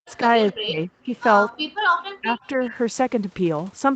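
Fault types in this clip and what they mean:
Speech suppressed in double talk: The voice sinks sharply, by as much as roughly 40 dB, and comes through in broken, hollowed-out pieces at the very start to 0.25 s, again from 0.51 to 1.11 s, and from 2.2 to 2.72 s, where the dips are a little shallower. The likely cause is an echo canceller that heard both ends talking at once, could not tell the local talker from the loudspeaker echo, and turned everything down.
Background gated by the echo canceller: Between 1.54 and 1.92 s the room sound behind the speech falls away almost to nothing, a drop of about 40 dB lasting close to half a second, then returns. This happens because the echo canceller, reacting to sound from the loudspeaker, clamped the microphone down hard and held it there until the far-end sound had passed and it released its grip.
Echo leak: Two brief, faint scraps of a delayed copy of the voice surface at 2.42 and 2.63 s, each only a few tens of milliseconds long and trailing the original by 262 ms. 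The first is very quiet and the second clearly louder, though still well below the main speech. This likely comes from a loudspeaker-side echo canceller that let part of its microphone pickup slip through and sent it back.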